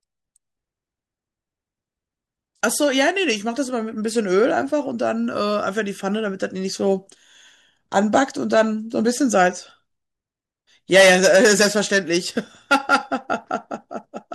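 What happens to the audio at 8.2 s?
Nothing goes wrong at 8.2 s; the speech there comes through intact, with no dropout, click, distortion or other audible fault.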